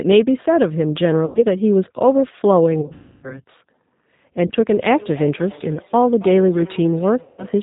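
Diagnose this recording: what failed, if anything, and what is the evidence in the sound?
Codec stage: the audio has passed through the G.729 codec (the G.729A variant at 8 kbit/s), and its damage is plainly audible as rough, synthetic-sounding speech. A spectrogram shows a hard ceiling at 4 kHz, because the codec rebuilds the voice from a vocal-tract filter, a pitch predictor and sparse pulses rather than the original waveform.

Network stage: VoIP packet loss concealed by the speech codec occurs at 1.26 to 1.45 s (90 ms lost), 2.81 to 3.40 s (360 ms lost over 420 ms, longest run 300 ms), 4.47 to 4.52 s (30 ms) and 7.23 to 7.45 s (150 ms). The decoder extends its last pitch and filter as fading buzz. The waveform shows smooth, decaying periodic stretches with weak recovery afterward.

Call-processing stage: feedback echo between two devices starts at 4.71 s and continues to the end. Speech returns roughly every 300 ms, at up to about 20 dB below the direct voice, because a second device in the room replays the call into a microphone whose echo canceller cannot remove it. 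A spectrogram shows faint, evenly spaced ghost copies of each syllable.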